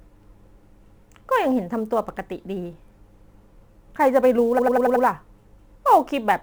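From start to finish the speech carries sample clock jitter. The converter's clock wanders by around seven microseconds, so each sample lands slightly off time, and the error grows where the waveform moves fastest. It is a fine hiss or grit that is roughly 30 dB below the signal, stronger on loud and bright sibilant passages and gone in pauses. A spectrogram shows a faint noise haze that follows the energy of the speech and is brightest above a few kHz.

At 4.58 s the audio begins to stutter with repeated frames and runs until 5.04 s. A stretch of compressed data, which points to a run of frames, plays again, and a block about 93 ms long comes back five extra times. That adds roughly 0.46 s to the clip. Each restart can bring a small click where the edges fail to match. On the waveform the same shape repeats side by side, and on the spectrogram the same pattern repeats.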